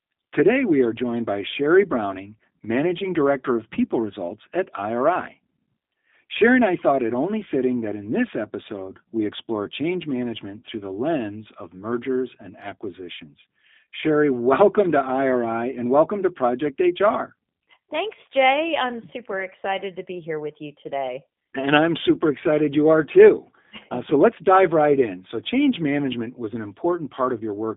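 Speech that's been through a G.729 codec the whole way, and you can plainly hear it: slightly rough, synthetic texture from the 8 kbit/s rebuild, with the band squeezed to roughly 150 Hz–3.6 kHz, so it's thin and boxy like a VoIP call.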